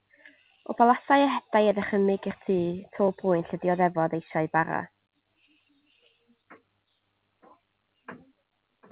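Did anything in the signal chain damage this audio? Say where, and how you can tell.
No, nothing in the signal chain damaged this speech clip. It went through a call path whose content stops at 4 kHz, which fits a narrowband telephone codec such as G.711 mu-law at 64 kbps.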